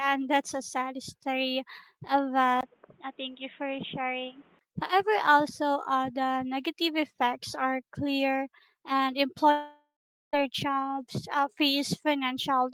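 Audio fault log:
2.61–4.61 s, input switched to a poorer device: after "a sad story of", a 20 ms gap, then audio is boxy, cut off above 3.8 kHz, about 5 dB quieter with a different background noise; likely a device change.
9.51–10.35 s, long network dropout: after "effects are clear and", sound smears into a fading buzz or hiss, then 0.45 s silence; 0.82 s is lost before "jobs uh", likely packet loss.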